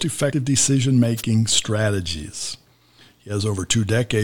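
At 1.17 s the speech is hit by a wireless microphone noise burst lasting about 50 ms, ending by 1.22 s. It sounds like a brief swish of static laid over the speech. The cause is a drop in the radio link from an analogue FM microphone. Reflected signals briefly cancel the direct one at the receiver. As the carrier weakens, the receiver's own hiss rises and breaks through.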